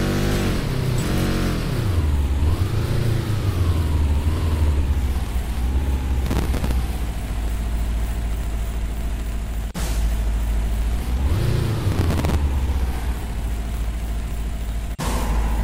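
From 4.15 s to 15.45 s, something likely outside the audio path, such as interference from nearby equipment or an interface in trouble, injects a train of clicks. Roughly a hundred similar pulses arrive at an uneven pace averaging about 8.9 per second. Their peaks are about as loud as the sound itself, so they come across as a busy, irregular ticking and popping laid over everything, including the quieter moments.

Twice, at 6.26 to 6.71 s and again at 11.92 to 12.35 s, the processor falls behind and misses around thirty buffer deadlines over the stretch. That fits very short buffers of a few milliseconds. Each missed buffer is filled with a scrap of old audio whose edges jump against the new material. This processor overload crackle is heard as a gritty tearing burst of just under half a second that rides on the sound and then stops.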